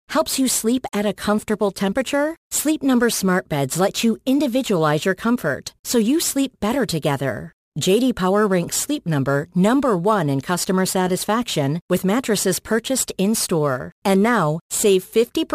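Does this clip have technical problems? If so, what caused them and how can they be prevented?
Yes. There's crude rate conversion running through the whole speech clip: a gritty, inharmonic fizz that rides along with the louder and brighter parts of the voice, sitting roughly 20 dB below the speech itself. It sounds like samples were simply dropped or repeated to change the rate, and the pattern fits a 48 kHz to 44.1 kHz conversion. Those skips recur in a fixed rhythm, which throws off tones unrelated to the voice. To prevent it, use a proper band-limited resampler with an anti-aliasing filter whenever the rate changes.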